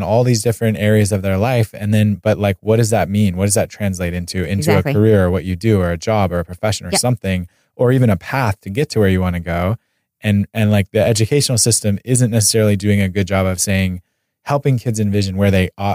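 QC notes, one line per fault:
No faults heard in the clip.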